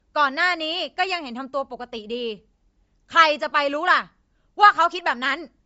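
Breathy, grainy speech throughout, with nothing above 7.7 kHz: likely Bluetooth LC3 compression, noise-filling an upper spectrum starved at what fits roughly 32 kbps.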